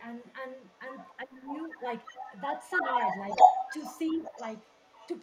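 Echo leak appears at 0.14 to 0.33 s and again at 0.49 to 1.18 s: a faint delayed copy of the speech trails the original by about 0.34 s, first about 30 dB down, then about 20 dB down. This is likely a far-end loudspeaker whose echo canceller let part of its microphone pickup return down the line. It sounds like a ghostly repeat sitting under the talker.

Speech suppressed in double talk follows at 1.23 to 1.55 s. For about 300 ms the talker's level sinks, by roughly 20 dB at its deepest, so the speech dips and thins out in patches. The likely cause is an echo canceller that heard both sides at once, could not tell the live talker from the returning loudspeaker sound, and turned both down together.

Echo leak returns at 1.53 to 1.83 s, about 15 dB below the speech, with the delay holding near 0.35 s. From 2.04 s to the end it grows to about 5 dB louder than the speech itself, arriving about 357 ms late. 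The delayed copy now dominates, and the sound becomes a smeared, doubled stream.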